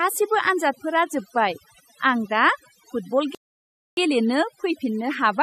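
Throughout the speech, overdone noise removal is audible: the noise reducer was set so aggressively that individual frequency bands close to its noise estimate are pulled far down or shut off entirely, taking the softer components of the voice along with the noise. The background drops and breaks up into twinkling specks.

At 3.35 s a rebuffering stall occurs. The player exhausted its downloaded audio and halted, leaving a gap of silence until 3.97 s, 624 ms in all. Playback then resumes exactly where it stopped, so no speech is lost, but that 624 ms of dead air is added to the running time.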